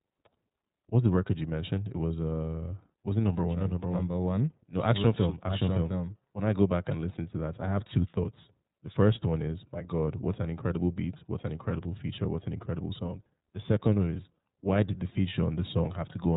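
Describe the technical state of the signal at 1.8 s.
At 1.8 s the speech carries iLBC codec damage present throughout: narrowband, with nothing above 4 kHz, and a plainly audible rough, synthetic texture consistent with independently coded 30 ms frames.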